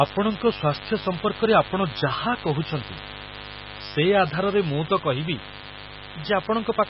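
Switching spikes from the mains supply leak in throughout, creating a mains buzz at 50 Hz and its harmonics: a steady, raspy buzz about 15 dB below the speech. Across the whole clip, likely MP3 compression at a very low bitrate, around 16 kbps, removes everything above 5.5 kHz and causes heavy damage: watery, swirling speech with smeared attacks.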